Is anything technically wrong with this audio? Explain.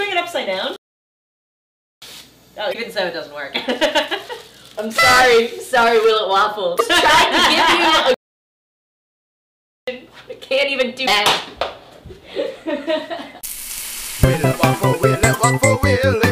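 Yes. There are two kinds of fault: playback stalls and damaged data in a compressed stream.

Playback stalls occur from 0.76 to 2.02 s and from 8.14 to 9.88 s. The player likely ran short of buffered data, or its output thread was held up, so nothing reached the output until it caught up again. The sound simply stops mid-flow, going silent for about 1.26 s the first time and about 1.73 s the second, before resuming.

Damaged data in a compressed stream shows up at 2.70 to 2.75 s, 6.76 to 6.81 s and 11.03 to 11.08 s. At each point some bytes of the encoded stream were corrupted. The decoder misread those frames, lost its alignment and had to hunt for the next valid frame header. Each event is heard as a brief chirp or blip lasting about 50 ms.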